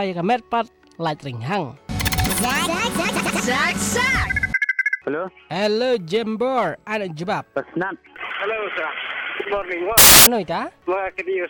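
From 9.98 to 10.26 s, the samples are built from the wrong bytes: the reader misaligns or swaps the bytes of each sample, so the rapidly changing low-order bits land in the most significant positions. For about 0.29 s the sound gives way to a loud burst of harsh broadband noise.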